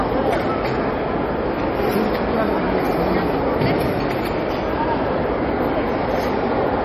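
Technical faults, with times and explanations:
Throughout, MP3 compression: plainly watery, swirly sound with nothing above 13.7 kHz, likely from an MP3 encode starved of bits, which fits roughly 40 kbps. Weak frequency lines blink on and off between frames, and the treble is cut at a fixed point.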